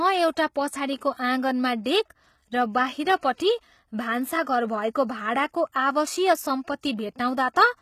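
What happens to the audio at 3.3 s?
At 3.3 s the speech is passing through the same damage as the rest of the clip, most likely HE-AAC compression at a low bitrate consistent with about 20 kbps. The codec keeps only the lower spectrum and synthesizes the treble by copying lower bands upward under a coarse envelope. Sibilants therefore sound gritty, metallic or lispy, with the treble's harmonics misaligned with the bands below, and nothing remains above about 14.9 kHz.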